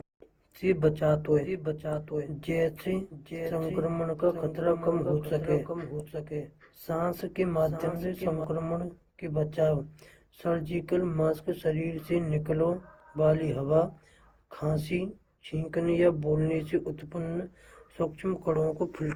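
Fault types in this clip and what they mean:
Generation loss: The speech sounds swirly, smeared and hollow throughout, with blurred consonant attacks and more grit than a single 48 kbit/s Opus pass would leave. This likely comes from around ten successive decode and re-encode passes, each adding fresh quantisation noise on a shifted frame grid.
Doubled audio track: From 1.44 s to 8.44 s a second, dry copy of the speech runs roughly 0.7 s behind the original, about 10 dB quieter, starting and stopping abruptly. The likely cause is a second, slower capture path or an edit that left two copies out of step.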